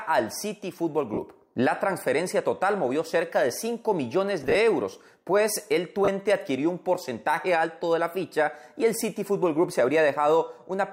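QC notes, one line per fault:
1.14–1.18 s, 4.43–4.55 s, 6.05–6.08 s: lost LE Audio frames. About 40 ms, 50 ms scattered over 120 ms in short gaps (longest about 20 ms), and 30 ms are filled by the LC3 decoder repeating the last spectrum with random signs. The result is a brief noisy smear rather than the hard silence or click of a plain dropout.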